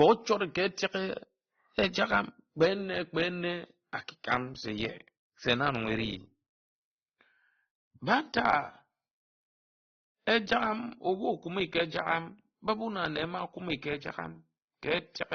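Throughout, the speech carries layered compression artefacts with nothing above 16.6 kHz, likely transcoding between lossy codecs, a low-rate AAC pass re-encoded to Opus, each adding its own artefacts.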